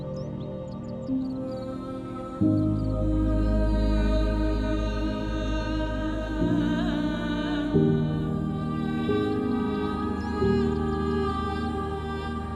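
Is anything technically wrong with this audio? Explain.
No, nothing technically wrong can be heard in this audio. There are no faults to point to anywhere in the clip.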